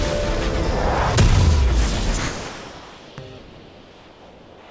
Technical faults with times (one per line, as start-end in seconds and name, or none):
2.18-4.70 comfort noise in place of the background